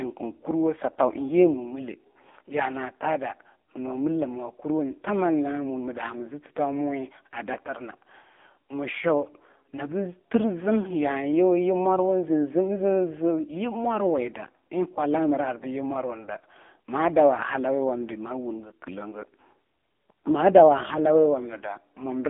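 From start to finish, the speech runs through the AMR narrowband mobile codec. Nothing above 3.8 kHz survives. The band sits between 250 Hz and 3.6 kHz. Sparse pulses drive a vocal-tract model, so the voice turns heavily buzzy and synthetic, which fits a low mode near 6.7 kbps.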